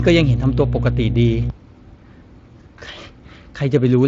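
From 0.0 to 1.5 s a steady 60 Hz mains hum, about as loud as the speech, sits underneath; unlike rumble, it is a fixed pitched tone with harmonics.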